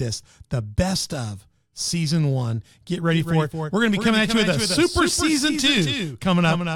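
A spoken-word recording that turns into a hard double image at 3.12 s and stays that way to the end. A second, full-band copy of the sound trails the original by about a fifth of a second, a few decibels quieter, with no decay or room colour, and it cuts in abruptly. It is a doubled audio track, likely from the signal being captured again through a slower path and mixed back in.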